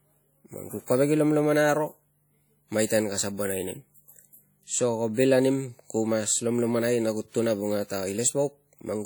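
Speech with plainly audible transform-codec damage throughout: ringing, washy hiss that breathes with the signal, likely WMA compression at a rate that fits about 48 kbps, with content extending to 20.1 kHz. Pre-echo appears from 2.86 to 2.90 s, where quantisation noise smears about 40 ms ahead of a sharp attack and softens its onset.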